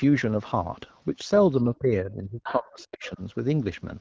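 From 1.74 s to 3.21 s the talker's level collapses in a pattern typical of speech suppressed in double talk: across roughly one and a half seconds the voice dips, at its deepest by around 30 dB. This points to an echo canceller that likely could not tell the talker apart from loudspeaker echo while both sides spoke, and so attenuated everything it heard.

Inside that same window, a second voice from the other side's voice leaking through appears twice. It is strongest from 2.43 s to 2.57 s, around 10 dB below the talker, and fainter from 3.01 s to 3.11 s, around 20 dB down. Both are short fragments. Their source is likely residual echo: the far end played on the device's loudspeaker was picked up by the microphone and not fully cancelled.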